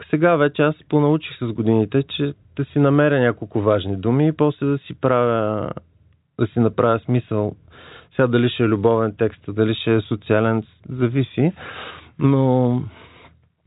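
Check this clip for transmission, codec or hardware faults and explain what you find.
Nothing stood out on listening; the speech comes through the narrow telephone band expected of G.711 coding, with nothing above about 3.8 kHz.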